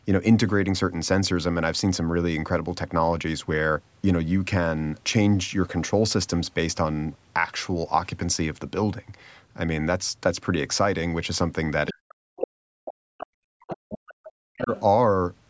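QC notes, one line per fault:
11.87–11.92 s, 12.36–12.48 s, 13.2–13.26 s, 13.68–14.82 s: other side's voice leaking through. A second voice sits behind the talker, mostly about 15 dB down, near 5 dB down at 12.36 s. This is likely residual loudspeaker echo. On the spectrogram it shows as faint, separate harmonic traces below 8 kHz.
11.91–14.71 s: speech suppressed in double talk. The talker's level dips in pieces, with the deepest drop around 40 dB, adding up to about 2 s. This is likely the echo canceller turning everything down while both sides speak. On the waveform the envelope shows sudden gouges, and on the spectrogram there are dark vertical gaps.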